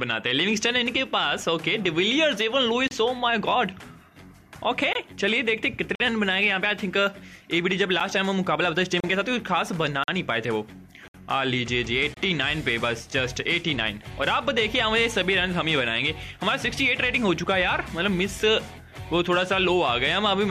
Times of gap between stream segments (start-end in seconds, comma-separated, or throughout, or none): 2.88-2.91, 4.93-4.95, 5.95-6.00, 8.00, 9.00-9.04, 10.04-10.08, 11.08-11.14, 12.14-12.17